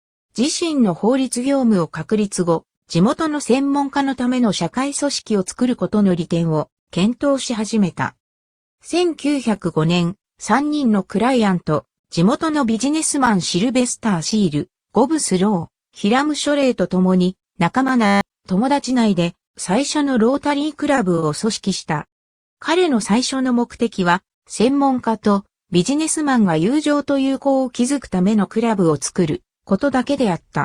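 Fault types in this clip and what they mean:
System hang loop: The playback froze while the sound hardware kept cycling one 10 ms slice of its buffer, from 18.06 to 18.21 s. That slice repeats exactly fifteen times, so it is heard as a steady 100 Hz buzz instead of a stutter, and roughly 150 ms of audio never plays. Unlike a late-packet stall, the looping is mechanical and identical, and material is lost.
Short stall from a late packet: Three times the jitter buffer ran dry and the receiver held the last sound until the packet arrived: at 20.95 s for 20 ms, at 21.15 s for 20 ms, and straight after at 21.19 s for 30 ms. Nothing is skipped. The sound is stretched briefly and resumes where it left off, and the delay grows a little each time. There is no exact repeating buzz as in a hang loop.
Jitter buffer speed-up: Between 28.80 and 29.58 s the receiver trimmed its surplus delay by cutting out tiny pitch-period pieces again and again. 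The audio runs at about 105% speed, and about 40 ms is removed in total. The pitch stays where it was, so the passage just sounds slightly hurried. This is the opposite of a stall, which holds sound too long instead of shortening it.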